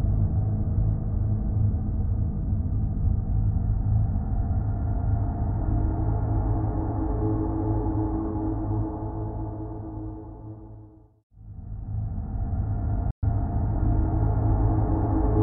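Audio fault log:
13.11–13.23 s playback stall: audio stops dead for 120 ms, likely the player starving for data; flat-line waveform gap, blank vertical band on the spectrogram.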